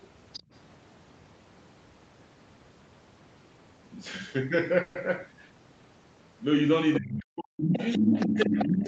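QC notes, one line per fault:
0.33–0.40 s, 6.94–6.99 s and 7.62 s to the end: other side's voice leaking through. A second voice slips in under the talker. The first two are brief scraps, about 20 dB and 15 dB below the speech. The last runs to the end of the clip and is much stronger, only about 5 dB down. The likely cause is loudspeaker playback of the far end reaching the microphone, with the echo canceller leaving part of it in the signal.
0.40–0.51 s: background gated by the echo canceller. Straight after the first leak, the room sound ducks for about a tenth of a second, dropping by about 21 dB before it comes back. The canceller clamped down on the microphone while the loudspeaker was active, taking the ambient noise with it, then released once it judged the echo gone. The sound reads as a short hole in the background rather than a cut in the speech.
4.81–4.97 s: call audio freeze. 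For about 0.14 s the sound stalls into a held, fading buzz or hiss, then carries on exactly where it stopped. Nothing is lost, but everything after this point arrives 140 ms later than before. This is likely late packets draining the jitter buffer, with the receiver stretching the last sound until delivery resumed.
6.98–7.80 s and 7.97 s to the end: speech suppressed in double talk. The talker's voice sinks and breaks up while the far-end voice plays on the loudspeaker. Over roughly 0.7 s in the first stretch it drops by as much as about 40 dB. In the second stretch it is pulled down by around 25 dB. The likely cause is the echo canceller failing to separate the near talker from the loudspeaker echo during overlapping speech, so it attenuated both together.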